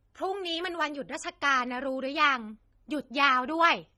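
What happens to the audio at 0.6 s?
At 0.6 s, as across the whole clip, the speech is dull and smeared with fizzy, warbling sibilants, likely AAC compression near 24 kbps stripping highs and leaving spectral holes.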